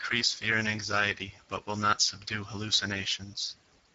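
Throughout, Speex codec damage from too few bits for the excitation makes the speech hoarse and noisy, which fits a bitrate near 10 kbps. A spectrogram shows nothing above 7.7 kHz.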